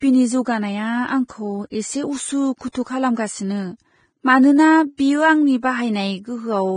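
Throughout, the speech sounds hissy and grainy, with roughened tones, blurred consonant attacks, and nothing above 9.7 kHz. The likely cause is heavy Vorbis compression: the coarse treble quantisation and lowered cut-off fit a low bitrate around 21 kbps.

Pre-echo appears as a brief hiss smearing ahead of sharp onsets, from 2.58 to 2.61 s, from 2.72 to 2.75 s, and at 4.97 s. Each lasts about 18 to 28 ms. The codec spread quantisation noise across its transform block, so the hiss filled the silence before each attack.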